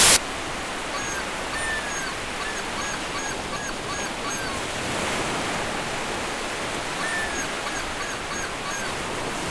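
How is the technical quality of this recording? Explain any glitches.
There's one clear glitch, right at the very start. From 0.00 to about 0.17 s you get file tags played as audio: a hard-edged burst of very loud white noise before the real sound begins. What's happening is that the player is treating an embedded cover picture as audio. The image data is compressed, so its bytes look essentially random, and read as samples they come out as very loud static that switches on and off abruptly.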